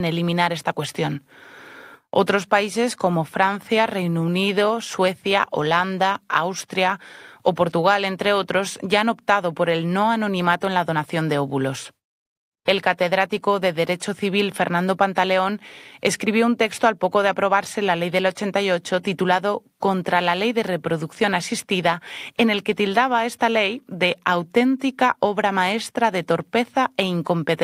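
Speech with no audible faults.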